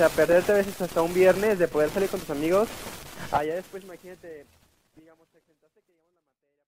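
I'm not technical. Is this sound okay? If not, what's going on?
Yes, this sound is okay; the gentle fade-out toward the end is a normal finishing touch.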